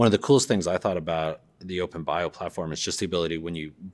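Nothing technically wrong turns up anywhere in this bit of speech, so there's no fault to pin to a time or trace back to a cause.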